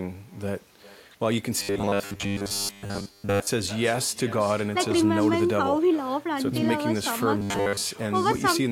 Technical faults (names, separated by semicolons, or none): echo with no canceller; robotic sound from repeated short buffers